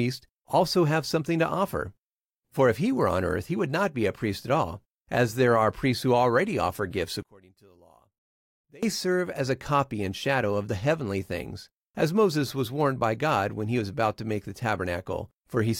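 From 7.23 to 8.83 s the speech drops by about 28 dB to a faint residue, likely one channel inverted, cancelling the shared centre content when summed to mono.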